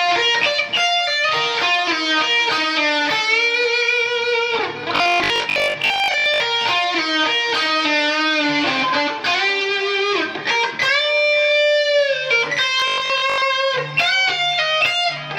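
Robotic sound from repeated short buffers appears from 4.96 to 6.40 s and again from 12.80 to 13.44 s. In both stretches the audio turns into a rigid, metallic buzz at 50 Hz that only roughly follows the original sound. The likely cause is new audio arriving too seldom, so the last 20 ms gets replayed to fill the gap, with about half the material repeated in place of the real audio that is skipped.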